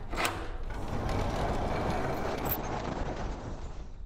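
At 2.24 s a call bitrate drop sets in and lasts to the end of the clip. The call's bandwidth estimate fell, so the encoder had to squeeze the sound into far fewer bits. The coarseness fits a fall from 64 kbps to about 9 kbps. The top end is cut too, from 20 kHz down to 8 kHz. The sound turns dull and rough, with a watery edge. It holds at its worst for 1.64 s and never recovers.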